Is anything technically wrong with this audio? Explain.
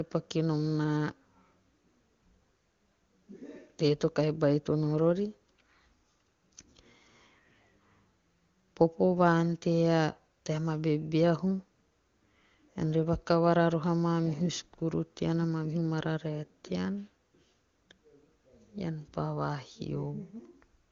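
No, nothing technically wrong can be heard in this speech clip. It has the band-limited character of the AMR wideband (HD Voice) codec, and the speech stays clear with at most faint coding traces, which points to a high rate such as 23.85 kbit/s.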